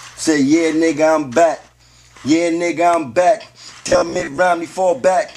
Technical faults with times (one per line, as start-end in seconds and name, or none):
3.83-4.40 robotic sound from repeated short buffers